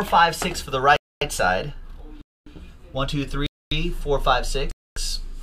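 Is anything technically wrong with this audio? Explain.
Yes. There are gaps between chunks at 0.96, 2.21, 3.46 and 4.71 s, each a 250 ms silence. The audio arrives in 1-second blocks and each join is likely padded or played late, so nothing is lost but the sound stops and restarts on a steady cycle.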